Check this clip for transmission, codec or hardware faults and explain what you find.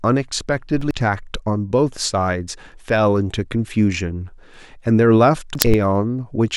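Two instances of compressed frames skipped occur in this speech clip, at 0.72 to 0.91 s and 5.55 to 5.74 s. In each, whole compressed frames never reach the output, either missing or rejected by the decoder as damaged, so playback jumps forward by a multiple of the frame length. The first loses roughly a fifth of a second of speech, the second roughly three tenths. Each join is an abrupt jump forward in the speech.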